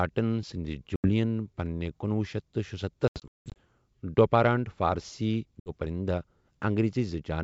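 Packet loss on an ADPCM call strikes this wideband speech three times: packets drop out and the gaps are filled with silence, so the receiving decoder's adaptive predictor and step size drift away from the sender's. The result is hard-edged holes, about 80 ms at 0.96–1.11 s, 60 ms at 5.60–5.72 s, and a broken stretch at 3.08–3.57 s where about 320 ms is lost in runs up to 180 ms. After each hole the speech returns slightly distorted, settling within some tens of milliseconds, while the G.722 coding beneath it stays clear.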